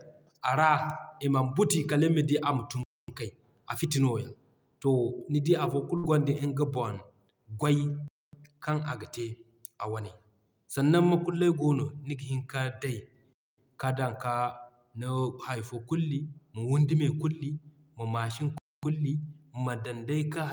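At 2.83 s, right after "nima di ama tun", a 250 ms gap between chunks cuts the speech to silence with hard edges. On a waveform it shows as a flat line, and on a spectrogram as a blank vertical band. At 5.97 s a burst of packet loss begins. About 57 ms of the last sound is held and faded as a dull smear in the spectrogram, and then roughly 60 ms of speech is skipped. The same 250 ms chunk gap repeats every 5 s, at 8.08 s, at 13.33 s just before "ka dan", and at 18.58 s after "ma machine".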